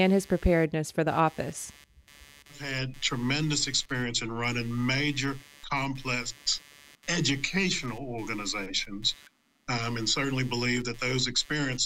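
From start to end, computer activity noise sits under the sound. Processor or mouse load disturbs the shared ground. It buzzes at roughly 150 pulses a second, about 25 dB down.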